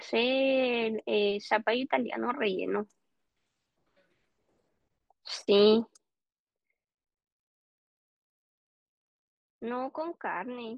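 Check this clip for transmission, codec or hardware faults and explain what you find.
One fault shows up, zipper noise. From 5.72 to 6.28 s the level drops about 10 dB in unsmoothed 1 dB steps, around twenty a second. Each step clicks, producing an audible zipping.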